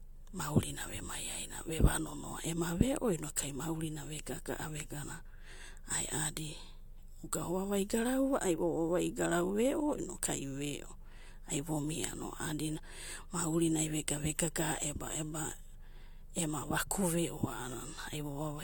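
No technical faults can be heard anywhere in this speech recording.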